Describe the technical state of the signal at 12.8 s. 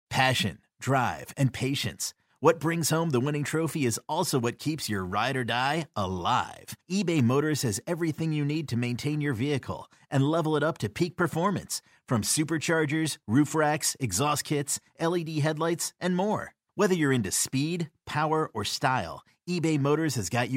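At 12.8 s the signal is intact, with no audible fault in the speech at that point.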